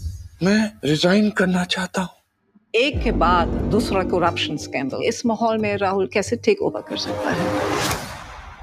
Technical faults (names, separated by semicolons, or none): noise suppressor applied to music or sounds; sound cut by the noise suppressor